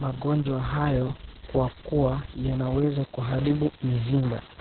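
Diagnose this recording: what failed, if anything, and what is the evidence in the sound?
Codec stage: Opus voice compression throughout. The spectrogram stops flat near 4.2 kHz, and the muffled, hoarse, robotic speech points to SILK narrowband at roughly 6 kbps.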